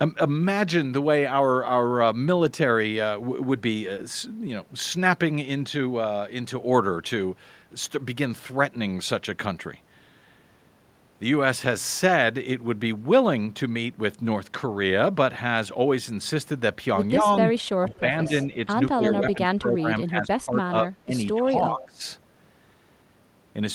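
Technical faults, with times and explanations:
17.21–17.25, 17.80–18.32, 18.96–20.55, 20.83–21.14 and 21.34–22.02 s: speech suppressed in double talk. The speech dips by about 5 dB at first, then by up to about 20 dB. This is likely an echo canceller mistaking overlapping talk for echo and turning it down.
17.89–17.99 and 21.81–21.85 s: echo leak. A faint copy of the speech returns 210 ms late, about 25 dB and then about 20 dB below it, in brief scraps. This is likely a far-end loudspeaker's echo slipping past its canceller.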